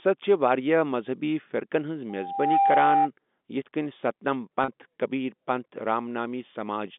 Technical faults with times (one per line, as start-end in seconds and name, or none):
2.09-3.09 loudspeaker feedback squeal
4.64-4.68 packet loss with pitch repetition